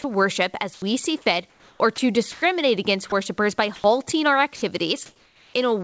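Right at the start, from 0.02 to 0.04 s, a sliver of the speech vanishes into steady hiss, and the same happens from 0.74 to 0.82 s, 3.10 to 3.12 s, 3.76 to 3.84 s and 4.56 to 4.62 s. That's sound dropped by the voice detector. The sender's detector likely decided those quiet bits were background and stopped transmitting, so the receiver filled in comfort noise. The longest gaps are around 80 ms, long enough to clip a syllable edge before the speech snaps back.

Between 1.50 and 2.42 s it gets choppier. This is sound chopped by the voice detector. The detector likely flips between sending and muting more than once across that stretch, about 420 ms of it replaced in total. You hear soft edges of words disappear.

From 4.56 s to 5.54 s the background itself changes character. That's comfort noise in place of the background, about 540 ms of it. Once the detector likely judged there was no speech, transmission paused and the receiver generated a smooth, featureless noise roughly matched to the background. 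The texture of the real ambience drops out and a flat, slightly artificial noise sits there instead, with the call's G.722 band topping out at 8 kHz throughout.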